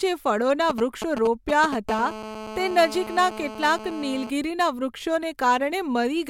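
Right after "જે ફળોના", from 0.70 to 1.74 s, GSM signalling bursts break in: a nearby 2G phone's radio pulses get rectified, giving galloping ticks and short 217 Hz buzzes nearly as loud as the speech. Then from 1.89 to 4.30 s it settles into a steady GSM phone buzz, the phone now in a call, with a hard, raspy 217 Hz tone about 12 dB under the speech.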